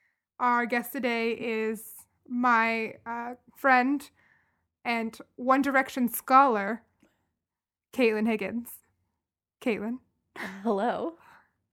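Listening to this recording of speech, nothing technical stood out.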